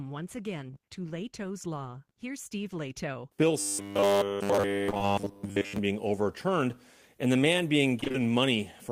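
From 0.67 to 0.78 s there are three back-to-back short concealed packet losses, each replacing about 20 ms of audio. The decoder extends the last sound (pitch continuation if voiced, shaped noise if not) and then crossfades back, which gives a brief smear or wobble. On a spectrogram the harmonics run flat and smeared across the span instead of moving. The waveform shows repeated-looking cycles where new detail should be.

From 3.60 to 5.78 s, ending just before "being overturned and the", comes robotic sound from repeated short buffers. The audio takes on a rigid 100 Hz buzz. Essentially the whole stretch is repetition, which is likely caused by a roughly 10 ms block being replayed while fresh audio arrives too late and is skipped. A spectrogram shows a fixed comb of lines at 100 Hz spacing. The waveform shows identical blocks repeating every 10 ms. Inside this span, three more short concealed packet losses at 4.90, 4.94 and 4.98 s (ending 5.02 s) each drop about 20 ms.

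From 8.00 to 8.16 s, right after "overturned and the man", repeated packet loss (robotic sound) makes the audio choppy. There are four gaps totalling 80 ms, the longest 23 ms, and concealment fills half the span. On a spectrogram this appears as alternating frozen, smeared slices and real frames. The waveform shows short looped patches between intact segments.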